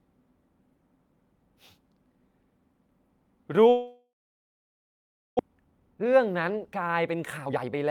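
From 3.69 s the speech breaks off. The last sound is stretched into a fading buzzy hiss, then about 1.27 s of silence follows before the audio returns at 5.41 s with roughly a second of speech simply gone. This is likely a long network dropout: packets stopped arriving, the receiver's concealment filled the gap until it gave up, and the missing stretch was never played. The audio came back around 0.7 s later than it should have.

From 5.48 s to the end, the speech sounds rushed: it runs at about 122% of normal speed while the pitch stays where it was. This is a jitter buffer speed-up. After the outage, delayed audio piled up in the buffer, so the receiver cut out many short pitch-period-sized slices in a row to drain the excess, removing about half a second in total.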